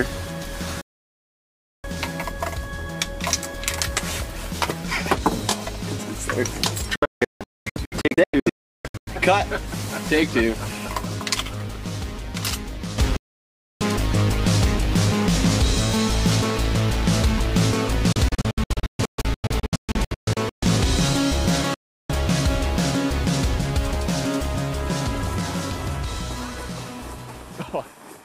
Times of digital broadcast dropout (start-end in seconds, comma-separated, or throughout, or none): 0.81-1.84, 6.96-9.07, 13.16-13.81, 18.12-20.63, 21.74-22.10